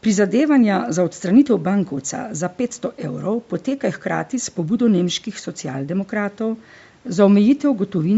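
From start to finish the speech carries a breathy, grainy edge. That is plainly audible codec damage, most likely from Bluetooth LC3 compression. The transform coder drops detail in the upper spectrum and fills the gaps with noise, and the texture fits a bitrate near 48 kbps with 10 ms frames. On a spectrogram the upper bands look speckled and patchy, stopping at 8 kHz, where the call microphone processing cuts off; the faint room noise sits about 39 dB below the speech.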